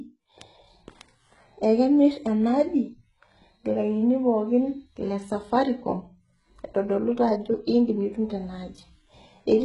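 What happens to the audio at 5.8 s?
At 5.8 s the speech carries the same HE-AAC compression damage heard across the whole clip, likely from that codec at a very low bitrate, around 12 kbps. Only the lower spectrum is truly coded; the treble is rebuilt by copying lower bands upward under a coarse envelope, so s sounds turn gritty and lispy and sound metallic. On a spectrogram, energy stops dead at 11 kHz, and the upper bands show blocky, repeated patterns whose harmonics fail to line up with those below.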